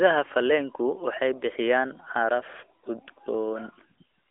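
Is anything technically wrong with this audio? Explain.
No, nothing here sounds technically wrong; it's a short speech recording with no dropouts, glitches or other problems to point to.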